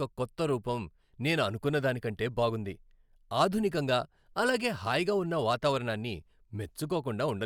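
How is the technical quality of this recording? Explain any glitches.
No glitches or technical faults are audible anywhere in the recording.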